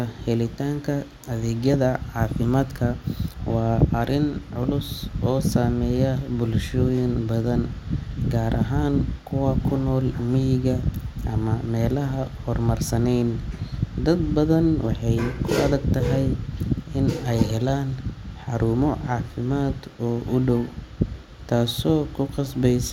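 Listening to the speech from beginning to end, nothing stood out as a technical problem at any point.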